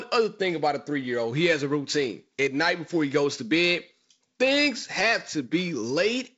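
No faults are present; the speech sits on a G.722 wideband link at what sounds like 48 kbit/s, with nothing above about 7.7 kHz and the light upper-band hiss and slightly noisier lower band that mode brings.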